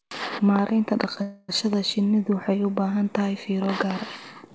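At 1.22 s the packets likely stalled in transit and the jitter buffer ran dry, causing a call audio freeze that lasts until 1.50 s. The receiver fills those roughly 265 ms by stretching the last sound into a fading buzz or hiss, never reaching silence. When delivery resumes, the speech picks up exactly where it stopped, so nothing is lost but everything afterwards runs about 265 ms late. The band-limited sound, with nothing above 8 kHz, fits a G.722 wideband call path.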